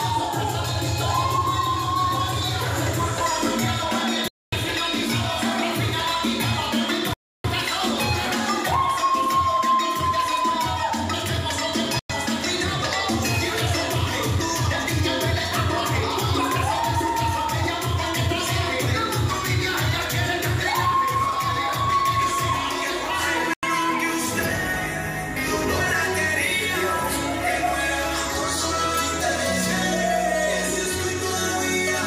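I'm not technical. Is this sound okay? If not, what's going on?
No. There are four Bluetooth stalls, at 4.28 s, 7.14 s, 11.99 s and 23.54 s, where the sound drops to complete silence for about a quarter second, a third of a second, a tenth of a second and a tenth of a second in turn, then carries on. This is likely wireless interference delaying the audio on its way to the headphones: their small reserve of sound ran out, so playback paused until the missing pieces arrived.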